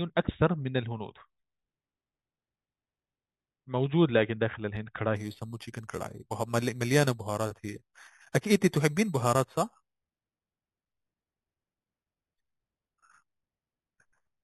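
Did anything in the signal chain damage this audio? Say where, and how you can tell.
Yes. Imaging from sample-and-hold upsampling sets in at 5.16 s and lasts to the end: a bright metallic fizz riding on the speech. Each sample was simply repeated to convert 8 kHz to 48 kHz, leaving mirrored images from 4 to 8 kHz at about -16 dB.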